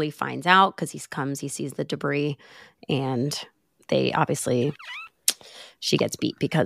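Nothing stood out on listening to this speech recording.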